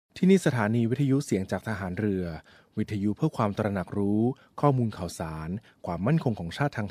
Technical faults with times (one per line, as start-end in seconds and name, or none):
none